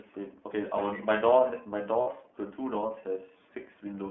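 Speech passes through the iLBC codec for the whole clip. The line band runs from 200 Hz to 3.4 kHz, and the coding adds a plainly audible rough, synthetic edge. The sound fits iLBC's 13.33 kbps mode with 30 ms frames. On a spectrogram, energy stops at a flat ceiling near 3.4 kHz. Lost iLBC frames cause a 60 ms gap from 2.01 to 2.08 s, which points to two missing frames. The decoder fills the gap by repeating the last pitch cycle mixed with noise, which sounds like a held, buzzy vowel. The waveform shows near-identical repeating cycles there, and the spectrogram shows frozen harmonic stripes. Normal speech returns immediately afterward.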